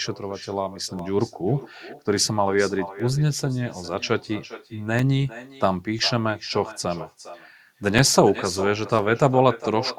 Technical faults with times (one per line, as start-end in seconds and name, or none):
0.00-9.98 echo with no canceller
0.99-8.99 periodic USB or driver dropouts